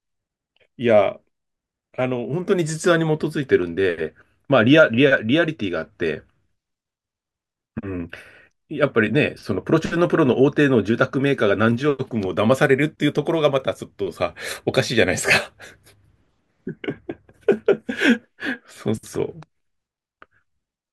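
A spoken recording with nothing technically wrong to point to anywhere along its run.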